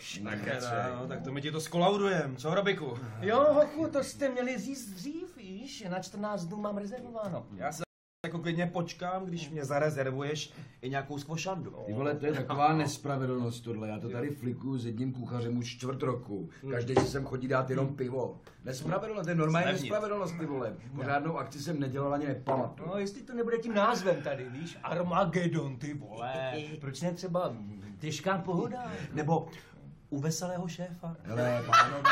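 At 7.84 s the sound drops to silence until 8.24 s, then resumes exactly where it stopped. This rebuffering stall adds 0.40 s because playback ran out of downloaded audio.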